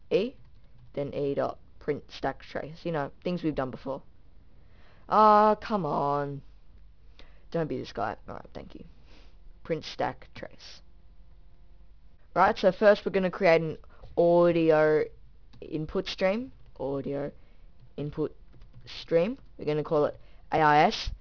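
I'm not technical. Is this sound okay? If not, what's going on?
No, it has aliasing from start to finish: the audio seems to have been converted to a much lower sample rate, around 11 kHz, without first removing its high frequencies. Everything above about 5.5 kHz folds back as false, unrelated tones, giving a gritty, metallic edge.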